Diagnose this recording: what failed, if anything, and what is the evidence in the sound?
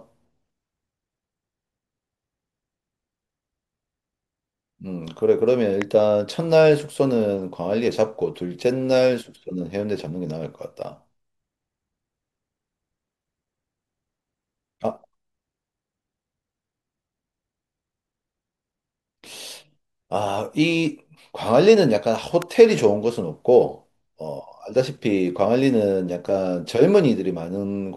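A loud pop at 5.82 s and another at 22.42 s, about 10 and 15 dB above the speech, likely from an analogue plug or static discharge; unlike dropouts, speech continues underneath.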